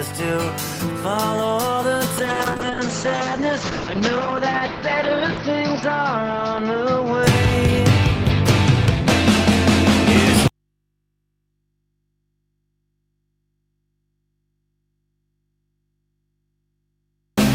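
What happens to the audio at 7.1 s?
At 7.1 s the audio is near the end of a call bitrate drop lasting from 2.18 to 7.79 s. The call's bandwidth estimate fell and the encoder was pushed to far fewer bits, which fits a drop from about 32 kbps to about 8 kbps, with the worst stretch holding for about 3.3 s. The audio is coded coarsely and turns rough and watery, and its top end is cut from 20 kHz to 6 kHz, leaving it muffled.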